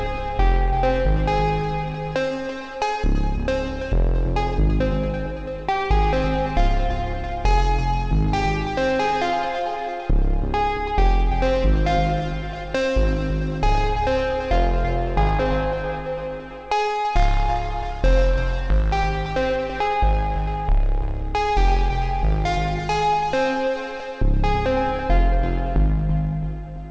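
No technical faults can be heard in this audio, which carries the 8 kHz top end expected of a G.722 call path.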